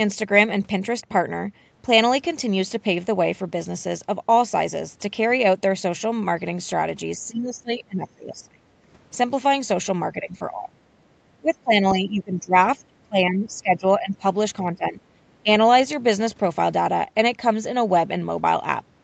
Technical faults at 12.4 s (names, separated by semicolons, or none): speech suppressed in double talk